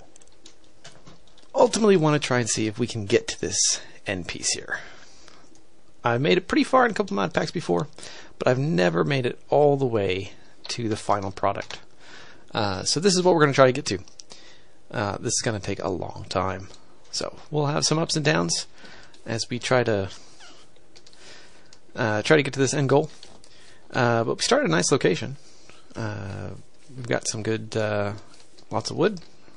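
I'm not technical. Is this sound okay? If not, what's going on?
No. Two problems can be heard.

All the way through, the sound is plainly watery. Sharp, hissy sounds swirl and chirp in a metallic way. This is likely MP3 compression squeezed too hard. The file doesn't have enough data to keep every detail, so the quietest parts of the sound get dropped. Those parts flicker on and off from moment to moment, which causes the swirling.

There is also pre-echo at 1.71 s and 3.07 s. Just before a sudden hit, a short hiss creeps in, lasting about 26 to 27 ms. The hit itself sounds soft rather than crisp. The encoder handles sound in chunks of about 52 ms, and it spreads its noise across the whole chunk. The quiet moment before the hit gets filled too. The encoder never switched to shorter chunks here.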